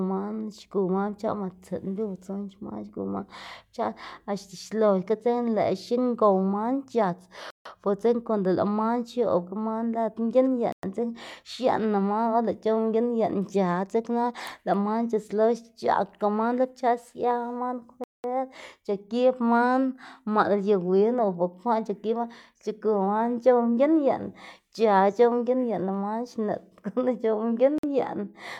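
Bluetooth stall-like dropouts at 7.50, 10.72, 18.04 and 27.78 s: the speech cuts to silence for about 0.15, 0.11, 0.2 and 0.05 s, then resumes. This is likely a drained headphone buffer waiting on resent packets.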